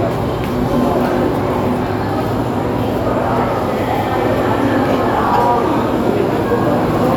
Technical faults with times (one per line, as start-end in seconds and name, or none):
none